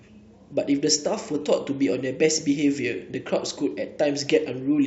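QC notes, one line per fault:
3.31–4.87 s, channel delay (comb filtering): from 3.31 s to the end, one channel lags the other by roughly a single sample, about 0.02 ms, and the mono sum cancels where the two are out of phase. With so tiny an offset the first notch sits up near 20 kHz, so instead of a hollow, phasey colour the speech just loses some air and turns slightly dull. On a spectrogram the top band fades from 3.31 s onward. The waveform looks barely changed, just a little smoothed.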